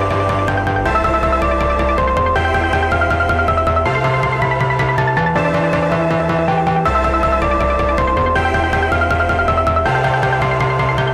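No dropouts, glitches, distortion or level problems turn up anywhere in the recording.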